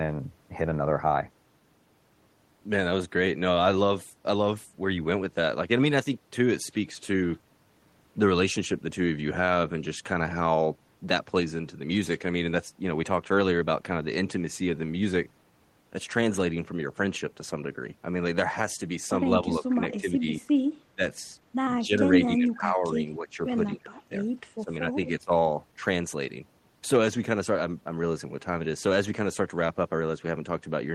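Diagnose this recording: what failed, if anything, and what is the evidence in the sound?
Call processing: speech suppressed in double talk, with the level dropping by up to about 25 dB at 19.4–20.3, 20.9–21.0, 21.8–24.2 and 24.6–25.3 s, likely an echo canceller attenuating both sides.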